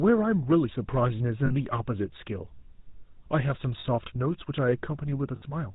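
Throughout, the speech carries the GSM full-rate codec's buzzy, gravelly grain, plainly audible and consistent with its 13 kbps rate. The coder rebuilds each stretch from a vocal-tract model driven by a sparse, regularly spaced pulse train, so nothing survives above 4 kHz. What separates it from simple telephone band-limiting is the rasp inside the band, not just the missing top: the excitation itself is coarse, and that roughness is loudest where the voice sits highest.

At 1.46 s, 3.80 s and 5.36 s come lost GSM frames. Each time the decoder keeps repeating the last good frame's settings, which fits two, two and three missing 20 ms frames. The first two gaps last 40 ms and the last lasts 60 ms. Each is heard as a brief, metallic, ringing hold of the preceding sound. A plain dropout would leave a clean hole, but here the sound is smeared forward rather than cut.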